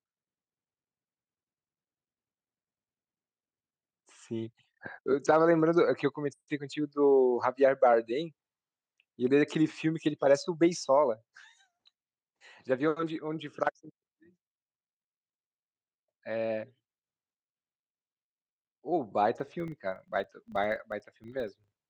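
From 19.36 s to the end, a filter restarted on every block produces a 25 Hz buzz. Each 40 ms block starts from silence, leaving a small transient at its edge. Unlike steady mains hum, the buzz rises and falls with the speech level.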